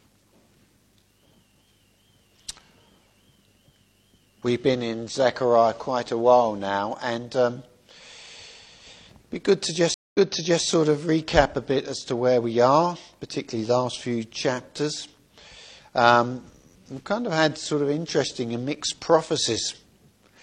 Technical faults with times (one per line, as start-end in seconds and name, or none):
9.94-10.65 stream reconnect